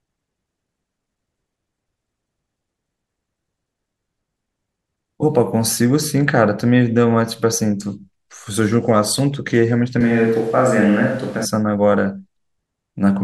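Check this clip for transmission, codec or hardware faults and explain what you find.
One fault is audible: a switch to a distant microphone. From 10.01 to 11.45 s the speech abruptly turns roomy and hollow, with thinner bass. The level barely changes. Room noise rises to roughly 25 dB below the speech. The close microphone likely dropped out, leaving a farther one picking up more room. The close sound returns just as suddenly.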